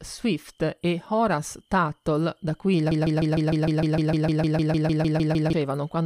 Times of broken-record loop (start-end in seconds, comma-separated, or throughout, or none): 2.91-5.53